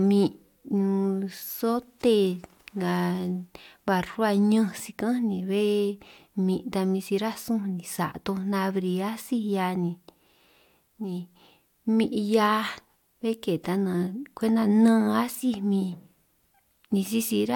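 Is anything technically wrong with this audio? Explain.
No, nothing technically wrong can be heard here.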